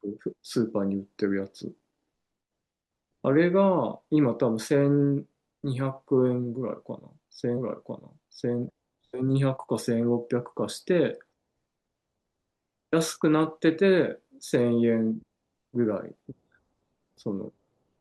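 A stream segment was repeated in this speech clip: the player fetched or queued the same one-second chunk twice, so at 7.57 s the audio jumps back and replays the preceding second of speech before carrying on from 8.57 s. The seam is audible as a small blip where playback snaps back, and the repeat adds 1.0 s to the running time, so everything after that point arrives a second later than it should.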